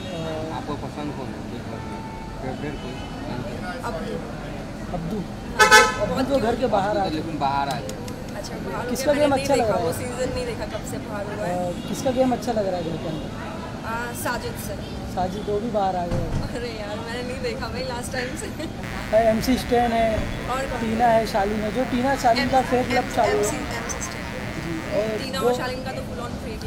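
From 18.83 to 25.24 s there's a mains buzz, raspy and steady, sitting not far under the main sound. Something like a dimmer or an unshielded lead is letting 60 Hz switching spikes through, so harmonics climb well into the kilohertz range.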